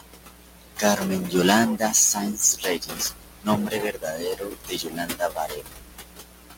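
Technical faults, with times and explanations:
Throughout: stuck bit. A distortion rides on every sound, and the pauses fill with a gritty hiss instead of falling quiet. The likely cause is one data bit held at a fixed value, which shifts about half of the samples by that bit's weight in a pattern set by the waveform. On a waveform, the trace looks stepped and offset. A spectrogram shows broadband hash spread across all frequencies, even in the gaps.
Throughout: noise suppressor artifacts. The room noise, which sits about 11 dB below the speech, is being pulled down band by band and frame by frame. It sinks between phrases and swells back underneath them. A spectrogram shows the background broken into flickering isolated specks, and the noise floor pumps up and down with the speech.
0.0–1.03 s, 1.2–1.34 s, 1.77–1.94 s, 2.14–3.49 s and 3.66 s to the end: speech cut by the noise suppressor. 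In these stretches the suppressor mistook parts of the speech for noise and turned them down with the background. The drops are about 22, 11, 16, 21 and 22 dB, so soft consonants and word endings sound swallowed or faint. On the waveform, the envelope dips. The spectrogram shows quiet high-frequency detail, such as fricatives, carved out.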